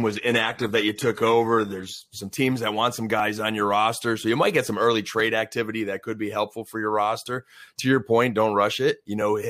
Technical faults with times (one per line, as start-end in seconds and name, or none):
0.00-2.01 adaptive stream starting at a low bitrate